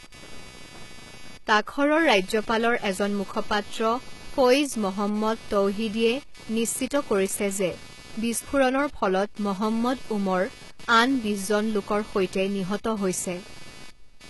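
Computer activity noise runs from start to finish: ground disturbance from processor or mouse load adds a buzz pulsing around 300 Hz, roughly 20 dB below the speech, visible as fine vertical striations.

Sibilants sound gritty and metallic throughout, with an empty band above 11.8 kHz, likely from heavy HE-AAC compression whose replicated treble fits a bitrate near 16 kbps.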